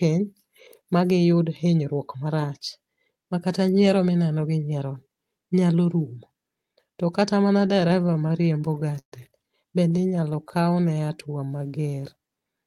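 From 7.67 to 9.14 s, packets kept arriving late, so the jitter buffer ran dry about twenty times. Each time, the receiver stretched out the last sound to bridge the wait, adding around 0.33 s in total, with the longest hold at 134 ms. These repeated stalls (stutter) conceal about a fifth of that stretch. Nothing is lost, but the speech halts and drags. A second, lighter stutter runs from 9.90 to 10.78 s. It has about a dozen much shorter holds, none over 11 ms, which make the speech stutter.

Starting at 10.28 s and overlapping the end of that stutter, the buffer was low or had just raised its target delay, and began rebuilding its reserve. It did this by repeating single pitch periods and fragments of pauses many times over, which is a jitter buffer slow-down. Through 12.54 s this inserts about 290 ms, so the speech plays at roughly 88% speed with its pitch unchanged. Sounds are drawn out.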